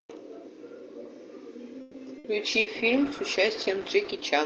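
A speech clip carried over an Opus call path, with a stall and two short dropouts followed by a drop in quality that lasts to the end. From 1.81 to 1.97 s the last sound is stretched into a fading buzz or hiss for about 130 ms before the speech picks up exactly where it stopped, with nothing skipped. The likely cause is a call audio freeze: packets were delayed in transit, the jitter buffer ran empty, and the receiver filled the wait. At 2.18 to 2.27 s and again at 2.60 to 2.69 s there is a briefer held, fading sound, and when the speech returns about 60 ms of it is gone each time. These are bursts of packet loss: a run of packets never arrived in time, so the receiver concealed the gap and then jumped ahead. From 2.52 s to the end the sound turns rough, watery and duller. This is a call bitrate drop: the bandwidth estimate fell, pushing the encoder from 32 to 10 kbps for the last 1.8 s or so. 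The coding became coarser and the audio band shrank from 12 kHz to 8 kHz.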